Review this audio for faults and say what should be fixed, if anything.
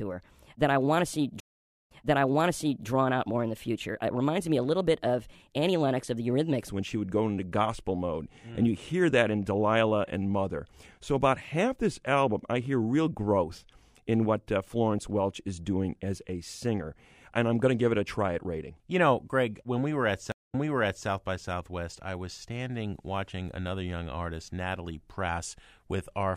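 The opening section, 0 to 6.69 s, is a section at the wrong speed, likely from playback against the wrong clock. It runs 1.2 times fast, lifting pitch by about three semitones and hurrying delivery until normal speed returns just before "when she would go". Locking playback to the recording's true rate would prevent this.

Two stream reconnects occur: the connection dropped, the player went silent, then restarted its decoder mid-stream. At 1.4 to 2.87 s a 0.5 s gap resumes 0.97 s earlier; after "when we were at", 20.32 to 21.08 s, 0.21 s of silence resumes 0.55 s back, repeating material. Buffering and resuming at the exact dropped position would prevent this.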